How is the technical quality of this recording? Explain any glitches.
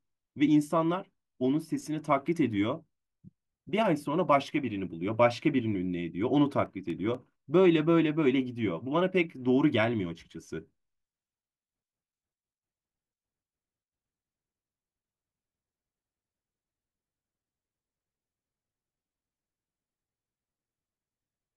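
The speech recording carries one glitch, a short run of CD scratch ticks between 6.17 and 7.15 s. A scratch or blemish on the disc wiped out more data than the player's error correction could rebuild, so on each turn of the disc the player had to patch or mute the damaged samples. Across just under a second you hear five evenly spaced ticks, roughly four to five per second, the longest lasting only about a millisecond.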